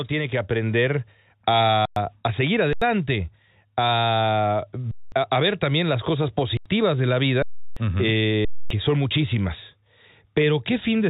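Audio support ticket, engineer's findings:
Automatic gain rising, 0.09 to 1.13 s: voice and background swell together by about 4 dB as AGC raises gain on a quiet input. The waveform envelope ramps upward over that second, and the spectrogram brightens uniformly across all bands.

Underrun with held sample at 1.85 s (about 110 ms), 2.73 s (85 ms), 4.91 s (210 ms, just before "también las cosas"), 6.57 s (85 ms), 7.42 s (340 ms, right after "de la"), and 8.45 s (260 ms, just before "son muchísimas"). The output buffer runs dry and the DAC holds its last value. On the waveform this is a flat line; on the spectrogram, a blank vertical band. Live audio is lost each time, roughly 0.1 to 0.3 s. The 85 ms gaps fit a 4096-sample buffer at 48 kHz. The call path caps everything at 4 kHz, which fits G.711 mu-law.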